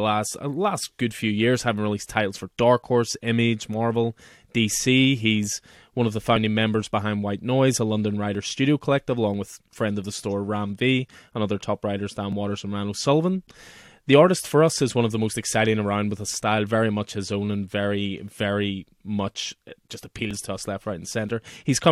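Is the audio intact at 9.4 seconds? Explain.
No. There is a tiny skip at 9.34 s, just before that moment. It comes from an overlap between stream segments: two segments' time stamps overlapped, so a few milliseconds of speech were trimmed and the waveform jumps at the join. The stream was cut into one-second segments.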